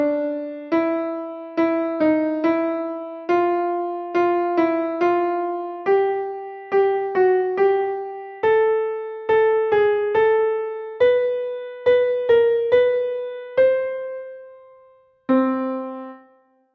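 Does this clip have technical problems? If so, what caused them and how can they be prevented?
No, there are no technical faults to report here.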